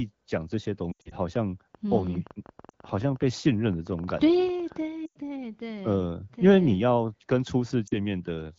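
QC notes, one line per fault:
0.91–1.14 s, 2.69–2.72 s, 5.06–5.16 s, 7.87–7.94 s: lost AMR speech frames. The AMR-WB decoder stretches the last good frame with falling gain, giving warbles and brief fades. The first event loses 140 ms across 200 ms, with the longest gap 80 ms.
1.75–4.77 s: train of clicks. About thirty similar pops arrive at roughly 10 per second with irregular spacing, peaking near speech level, likely from nearby equipment interference.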